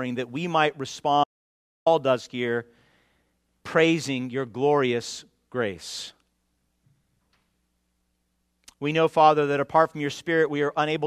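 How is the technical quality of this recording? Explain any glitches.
There's one real glitch here, an audio dropout to silence, running from about 1.24 s to 1.86 s. For roughly 0.62 s the sound just stops dead, with no room tone or noise floor underneath, then picks up again mid-flow. That silence suggests the input went away, likely a momentary disconnect or mute upstream, while the recorder kept writing silence. Whatever happened in that gap isn't recoverable.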